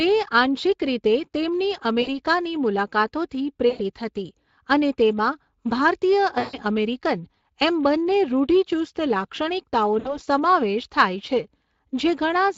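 Speech coded with the Speex codec at a rate the sound points to as around 20 kbps, and the damage is plainly audible throughout. The CELP model has too few bits for the excitation, so the voice comes out hoarse and grainy. This constant coarseness sets it apart from broadband noise added on top of the signal, which would sit behind the voice rather than inside it. Four dropouts show VoIP packet loss concealed by the speech codec, at 2.01–2.10 s, 3.69–3.81 s, 6.39–6.59 s (just before "અમેરિકન એમ બંને રૂઢિચુસ્ત") and 9.99–10.20 s. Their lengths of about 60, 100, 140 and 60 ms fit runs of 20 ms frames. In each gap the decoder extends the last pitch and filter into a buzzy tone or a coloured noise that fades instead of falling silent or repeating a clean chunk, and the voice stays weak for a moment after the signal returns. That set of traits is what distinguishes codec concealment from simple dropouts or jitter-buffer repeats.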